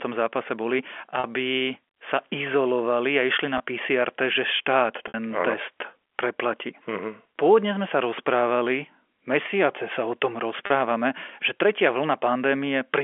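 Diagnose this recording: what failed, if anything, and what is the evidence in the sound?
Network stage: packet loss with pitch repetition at 1.2, 3.58, 5.08 and 10.66 s (40, 20, 60, 40 ms gaps), each concealed by looping the last pitch period, seen as identical repeated waveform cycles and frozen spectrogram harmonics.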